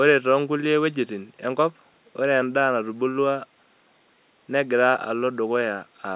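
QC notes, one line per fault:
No faults heard anywhere in this speech recording.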